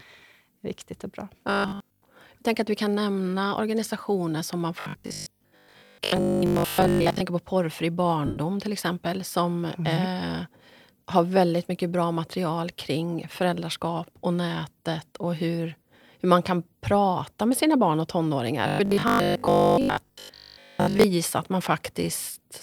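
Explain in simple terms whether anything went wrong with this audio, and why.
Three stretches of the speech turn into a stiff, metallic buzz: 1.50 to 2.02 s, 4.80 to 7.20 s, and 18.68 to 21.04 s. The speech still moves roughly with the talking, but it sounds robotic, with a low 50 Hz hum running through it. This is robotic sound from repeated short buffers. The likely cause is that new audio arrived too slowly, so the player kept replaying tiny snippets, each about 20 ms long, instead of the real sound. For most of each stretch, the speech you hear is a repeat rather than new audio.

At 8.26 s there is a brief gap of about 105 ms where the speech turns into a short, noisy smear. This is lost LE Audio frames. Part of the wireless Bluetooth stream never arrived, so the receiver filled the hole by reusing the last bit of sound it had, scrambled to hide the gap. That stands in for the missing speech but cannot recreate it, so the gap sounds blurred.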